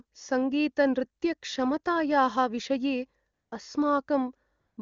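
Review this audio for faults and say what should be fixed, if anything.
AMR comfort noise shows up twice in this speech clip, from 3.33 to 3.51 s and again from 4.59 to 4.77 s, each gap about 180 ms long. In both spots the phone decided nobody was talking and stopped sending speech frames, so the far end filled in a smooth synthetic hiss from a rough level-and-spectrum sketch. You hear the real room tone drop out and a flat, even noise slide in. The HD Voice wideband coding around it sounds clean. To prevent it, disable DTX or loosen the voice activity detector so short pauses keep their real frames.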